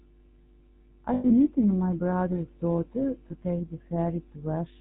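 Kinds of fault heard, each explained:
GSM full-rate codec: The whole clip goes through the old GSM coder, which models the vocal tract and drives it with a sparse pulse train. That gives the speech a plainly audible buzzy, gravelly grain and cuts everything above 4 kHz, which fits the 13 kbps full-rate mode.
lost GSM frames: When frames go missing, the decoder replays the last good one at falling level, so you get a short, rough, metallic ring. It's scattered across 1.14 to 1.31 s just before "meeting my brother's daughter", with the longest stretch around a tenth of a second. There's also one quick 20 ms blip at 3.3 s, between "meeting my brother's daughter" and "take the".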